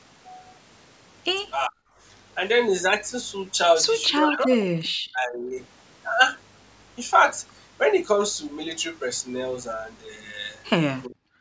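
At 1.68–1.74 s, 4.21–5.55 s and 11.07 s onward, speech drops out deeply, likely speech suppressed in double talk; waveform and spectrogram show near-empty gaps.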